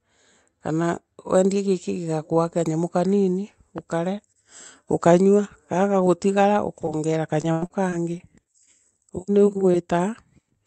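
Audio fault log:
3.78 s, loud pop: A single sharp pop lands on top of the speech and lasts about 20 ms. Its peak rises a few dB above the surrounding sound, roughly 5 dB. The speech carries on underneath without a break. This is a brief electrical pulse, likely from a plug, switch, static discharge or driver glitch, added to the signal. The circuits after it shape that pulse into the short, hard thump heard here.
6.85–8.69 s, repeated packet loss (robotic sound): Across this stretch the speech turns choppy and robotic. There are eight separate gaps, and the longest is 99 ms. In total 260 ms of audio goes missing. The receiver patched 243 ms of that, about 13% of the span, by extending the last sound. Around 150 ms came back from error-correction copies. The holes arrive close together, so the patching repeats and produces the robotic texture.
9.56 s, 9.74 s, 9.92 s, lost packet rebuilt from error correction: Three moments of about 20 ms each sound rougher and noisier, but there is no gap. 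Each lost packet was replaced by a low-bitrate copy carried inside the following Opus packet. The decoder played that coarser copy in place of the original. The result is a short grainy patch rather than a dropout. The call is band-limited to 8 kHz, so no extra loss of top end stands out.
9.72–9.76 s, short concealed packet loss: About 20 ms of audio did not reach the decoder in time. The receiver filled 17 ms of that hole by continuing the preceding sound, then blended back into the real signal. This gives a brief smear or wobble in the speech. It overlaps the error-correction patch at 9.74 s, which rebuilt the tail of the same hole. The two repairs together make one short rough spot.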